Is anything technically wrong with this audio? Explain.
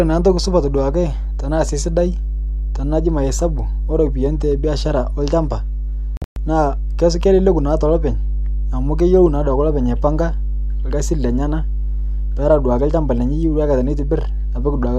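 Yes, the speech has two faults. Mains hum runs through the whole clip as a steady 50 Hz tone with low harmonics, roughly as loud as the speech itself. A ground loop or nearby transformer is coupling the power line into the signal path.

A digital broadcast dropout occurs from 6.17 to 6.36 s. The receiver lost the signal or rejected corrupted frames and muted until clean frames returned. Several short silent holes are scattered over 192 ms, totalling 168 ms lost, the longest lasting 120 ms.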